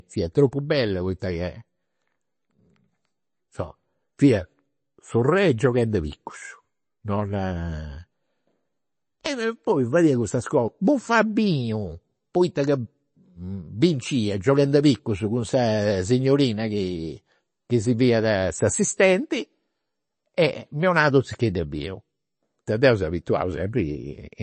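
Speech recording with MP3 compression damage plainly audible for its full length. Nothing is present above 8.3 kHz, where the encoder has cut the treble to save bits, so s sounds lose their top end. Weak spectral lines switch on and off between frames, giving a watery, swirly texture, and consonant attacks are smeared. The damage is likely from an MP3 encode at a low bitrate, which fits roughly 32 kbps.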